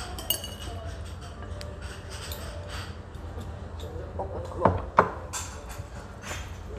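No technical faults can be heard anywhere in the recording, and the signal stays steady and intact throughout.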